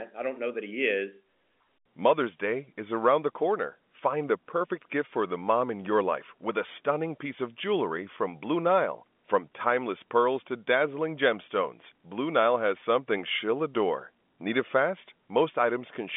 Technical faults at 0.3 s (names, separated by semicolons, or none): none